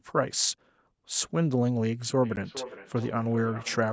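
From 2.2 s to the end of the speech, a feedback echo between two devices appears. A second device in the same room is playing this call aloud, and this microphone picks that playback up again. The echo canceller here only removes what its own device plays, so the returning sound passes straight through. Each stretch of speech comes back roughly every 0.4 s, at most about 15 dB below the direct speech, thinner and more ringing with each pass.

At 2.36 s, inside that echo, a block of digital silence briefly replaces the audio. A 10 ms run of samples was set to zero, pointing to an output buffer that was not filled in time or a calculation that produced invalid values. The signal drops to dead silence and returns with no fade, so both edges meet as hard steps. At this length it is heard as a tick or dip rather than a gap, and the call audio around it is band-limited, holding nothing above 8 kHz.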